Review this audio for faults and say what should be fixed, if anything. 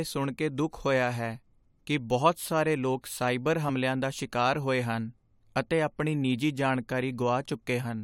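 At 3.68 s, compressed frames are skipped: about 20 ms of speech vanishes, leaving a visible discontinuity or brief spectral smudge. Prevent this by ensuring the encoded file transfers intact and isn't truncated.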